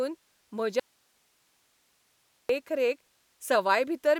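Speech clip with an audio dropout to a faint residue from 0.80 to 2.49 s: the signal abruptly vanishes for 1.7 s, leaving only hiss roughly 40 dB down, likely a broken feed into a live path.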